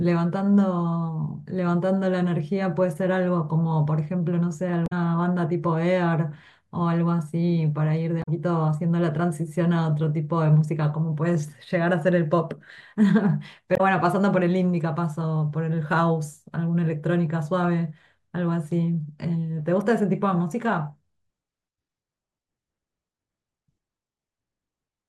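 Speech clip with damaged data in the compressed stream: brief decoder glitches at 4.84–4.92, 8.20–8.28 and 13.74–13.81 s, as the decoder loses frame sync.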